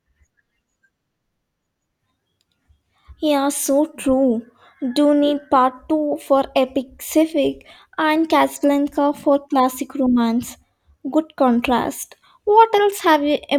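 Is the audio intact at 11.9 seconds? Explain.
Yes, the speech at 11.9 seconds is intact, with no dropout, click, distortion or other fault at that moment.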